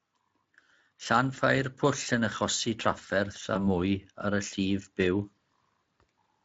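At 3.53 s the speech briefly smears into a held, stretched sound that fades before packets resume at about 3.59 s. This is VoIP packet loss concealed by the speech codec. The gap fits a single lost 20 ms frame. The Speex decoder, whose light coding texture points to a fairly high quality setting, filled the hole by extending its last pitch and filter at falling gain. It then needed a few tens of milliseconds to settle.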